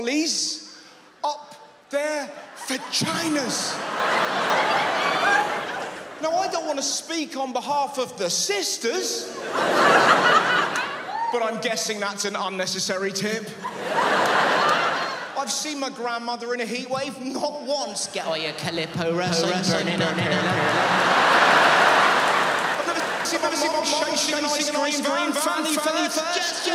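Chunks out of order at 4.0 to 4.5 s: two 250 ms blocks play swapped, the later one arriving a chunk early because its predecessor was written late. Nothing goes missing, but the sound jumps back on itself, with three hard joins.

A doubled audio track starts abruptly at 19.26 s and runs to the end: a second full-band copy, at roughly the same level and trailing by about a third of a second, sits dry on top of the original, likely from the signal being captured again through a slower path.

The same chunks out of order fault recurs at 22.75 to 23.25 s, again two 250 ms blocks transposed, producing another brief jumbled moment within the doubled section.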